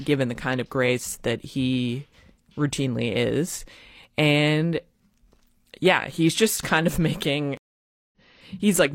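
At 7.57 s a stream reconnect cuts the speech for about 0.55 s, a flat-line gap in the waveform and a blank spectrogram column, resuming roughly a tenth of a second further on at 8.17 s.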